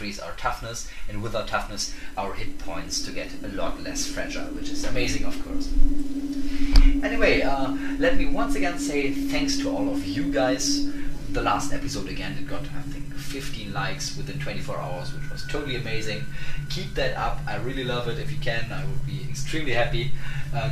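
No technical fault can be heard anywhere in the audio, and the signal stays steady and intact throughout.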